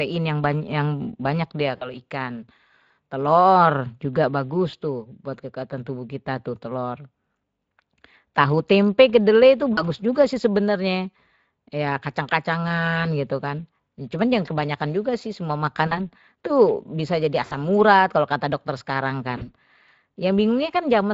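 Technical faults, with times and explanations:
Throughout: Speex codec. The speech has a hoarse, noisy CELP texture, which fits a setting near 20 kbps. It is steady across the clip, unlike the brief concealed gaps below.
1.77–1.92 s, 4.71–4.75 s, 9.73–9.83 s, 15.87–16.07 s, 17.45–17.53 s, 19.37–19.53 s: VoIP packet loss concealed by the speech codec. Each gap becomes a stretched, fading sound rather than silence, and the speech stays weak briefly afterwards.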